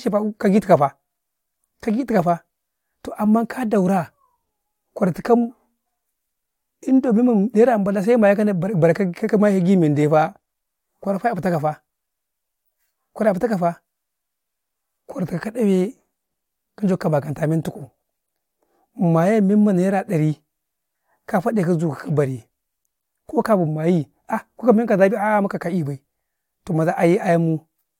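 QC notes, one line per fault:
Nothing to flag on this speech clip, so it can go through without any QC notes.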